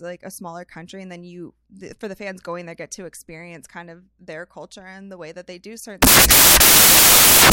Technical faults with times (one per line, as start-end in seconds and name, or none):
6.02-7.52 samples built from the wrong bytes